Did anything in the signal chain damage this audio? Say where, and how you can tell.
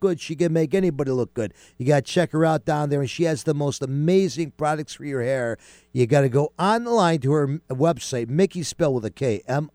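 No, nothing in this speech recording stood out as damage from any stage of the chain when I listened to it.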